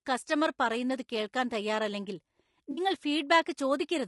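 Low-delay AAC compression runs through the whole speech clip and is plainly audible. The voice has a rough, grainy texture, with noise filling the gaps between pitch harmonics and a top band that sounds thin and somewhat synthetic. Short coding frames of about 20 ms resolve the harmonic structure poorly, so a low bitrate spreads quantisation noise across the spectrum. This is likely AAC-ELD, and the damage level fits a rate around 32 kbps.

AAC frame loss with concealment occurs from 2.71 to 2.80 s, right after "കസ്റ്റമർ പറയുന്നത് കേൾക്കാൻ തയ്യാറല്ലെങ്കിൽ". Roughly 60 ms of coded audio went missing, consistent with three dropped frames. The decoder patched the gap by reusing the last good spectrum with altered phase and estimated energy. The result is a brief smeared, noisy, phasey patch where the speech blurs before normal decoding resumes.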